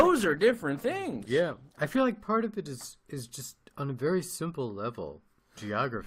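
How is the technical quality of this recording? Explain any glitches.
The speech opens at reduced quality and then improves once, with no break. That is an adaptive stream starting at a low bitrate. From 0.0 to 2.0 s, just before "like part of it", the treble is dull and codec artefacts are stronger, which points to roughly 16 kbit/s Opus. It then steps up cleanly to a fuller sound, consistent with about 64 kbit/s, once the player had measured the connection. Unlike a mid-stream network drop, the poor section sits only at the very start and ends in a seamless upgrade, not a gap or a downgrade.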